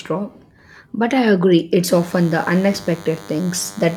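From 1.91 s to the end, a DECT cordless phone buzz sits under the speech. A nearby DECT handset or base station sends radio bursts 100 times per second. The audio circuit rectifies them. The result is a thin, steady 100 Hz buzz with many harmonics, about 20 dB below the speech.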